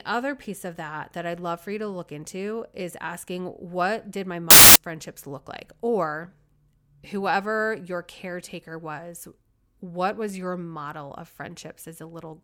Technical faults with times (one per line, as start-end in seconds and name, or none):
4.50-4.76 samples built from the wrong bytes